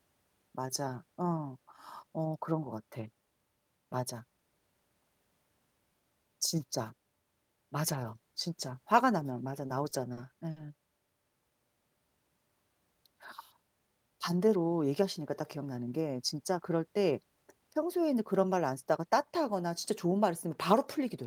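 From 9.67 to 10.58 s the speech stutters through repeated stalls. Packets arrived late, so the jitter buffer ran dry four times, and the receiver stretched the last sound to cover roughly 130 ms, with the longest gap at 50 ms. Nothing is lost, but delivery drags and hitches.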